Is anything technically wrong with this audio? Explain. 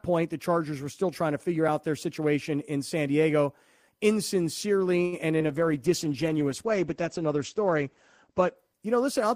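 Yes, this speech has three faults close together.

A short stall from a late packet at 5.05 to 5.14 s: the jitter buffer ran dry, so the last sound is held for about 68 ms before resuming, with nothing lost.

Short concealed packet loss at 5.38 to 5.42 s: about 20 ms never arrived. The receiver extrapolated the preceding sound, leaving a brief smear or wobble.

A call bitrate drop from 5.50 s to the end: the encoder fell from 32 to 12 kbps and the bandwidth narrowed from 20 kHz to 8 kHz. The speech turns muffled and rough, worst for about 2.7 s.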